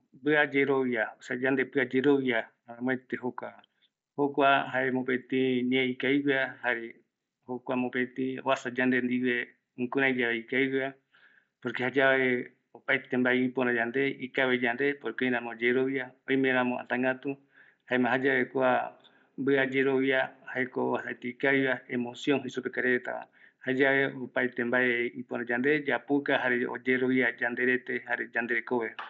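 The speech carries no technical faults, arriving over a Bluetooth mSBC headset link whose wideband path reaches up to 8 kHz, as that codec normally does.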